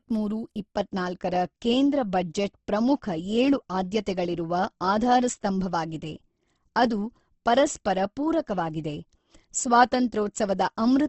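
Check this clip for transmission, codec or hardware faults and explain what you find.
One codec fault runs through the whole clip. Throughout, the speech sounds grainy and rough, likely from Opus compression near 16 kbps filling starved bands with noise. The spectrogram stops sharply at 8.1 kHz.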